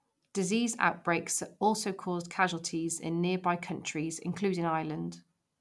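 No technical faults are audible.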